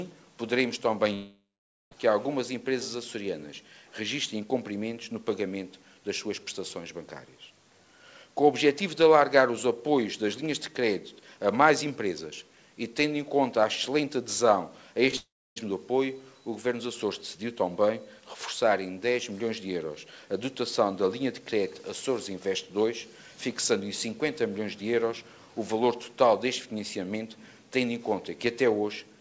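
Audio carried over a call link whose band stops at 8 kHz, which fits a G.722 codec at 64 kbps. At 1.14 s the sound turns into a fading buzz, then about half a second of silence before it resumes at 1.93 s, with roughly 0.78 s never heard. The same happens from 15.16 to 15.58 s, where about 0.4 s is lost and about 0.29 s is silent. Both gaps are likely a long network dropout, with the receiver stretching the last sound until it had nothing left to continue. Just before that, from 15.11 to 15.14 s, there is a brief smear. This is a short concealed packet loss: about 20 ms failed to reach the decoder in time and was patched by extending the preceding sound and blending it back into the real audio.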